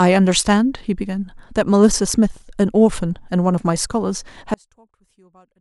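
From 4.54 s to the end, the speech drops to a faint remnant about 36 dB down, its centred body nearly gone. The likely cause is one channel inverted: with one side's polarity reversed, the content common to both cancels in a mono sum.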